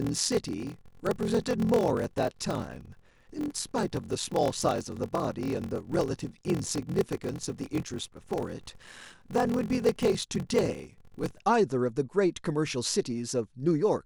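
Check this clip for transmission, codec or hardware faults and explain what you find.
One fault is present: a block size mismatch (padded) from 0.0 to 11.43 s. A stage writes short blocks into larger reads, which fits 1024-sample reads, zero-filling each remainder. The speech runs slower, at 0.861 times speed at about normal pitch, under a 43.1 Hz buzz. Waveforms show regular flat gaps; spectrograms show vertical stripes at that rate.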